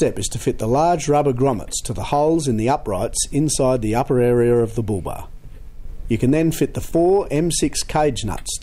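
No technical faults can be heard anywhere in this recording.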